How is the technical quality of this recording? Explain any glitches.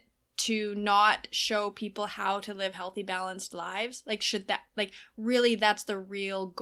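The technical quality of this recording is good, with no glitches to explain.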